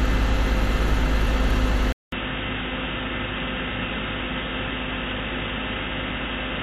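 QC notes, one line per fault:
1.92–6.63 s, input switched to a poorer device: after a 200 ms gap the sound turns dull, losing everything above 3.8 kHz and dropping about 10 dB, likely a change of microphone.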